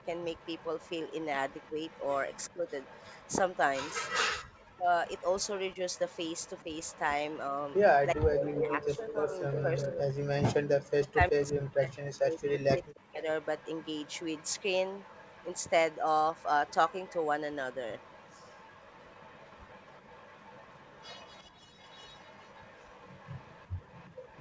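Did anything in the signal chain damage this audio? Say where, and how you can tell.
Yes. A faint delayed copy of the speech, trailing by about 359 ms, runs through 0.0–4.1 s and 13.42 s to the end, and is much louder at 5.08–9.88 s. This is likely an echo leak from a far-end canceller in the call processing.

The speech dips and cuts out in pieces at 1.69–2.68 s and 4.45–6.69 s, and across most of 8.14–13.28 s, by up to about 40 dB. This is likely speech suppressed in double talk, where the echo canceller turned down overlapping speech.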